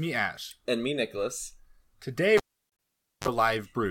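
At 2.37 s the speech is cut by a sharp pop as a live cable is pulled and plugged in. The connection stays broken for about 0.86 s, leaving near silence. A 39 ms burst of 50 Hz mains buzz sounds as only the plug tip makes contact. A second pop at 3.28 s marks full reconnection. What separates this from a digital dropout is the electrical signature: two pops and a hum burst, not a clean gap.

From 2.70 to 2.79 s, inside that unplugged stretch, a corrupt frame muted fault adds its own 93 ms hole. Damaged compressed data was rejected by the decoder, and the player filled the space with silence. That span fits several codec frames. Unlike the cable fault, this gap starts abruptly with no pop and no mains buzz. Its length is a whole number of frames, and playback timing is kept.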